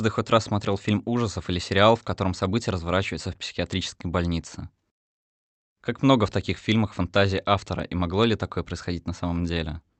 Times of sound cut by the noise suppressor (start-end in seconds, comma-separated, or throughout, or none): none